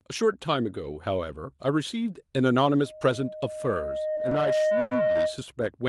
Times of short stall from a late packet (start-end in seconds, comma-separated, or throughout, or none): 4.15-4.43